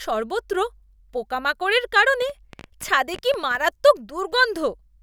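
From 2.22 to 3.56 s a train of clicks rides over the speech: around fifteen near-identical pulses at 10.5 per second, unevenly spaced, peaking roughly level with the speech. The sharp ticking points to interference or a faulty connection or power supply as the likely cause.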